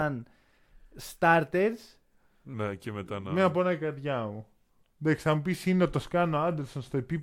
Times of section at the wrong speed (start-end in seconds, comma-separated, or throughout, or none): 2.54-7.23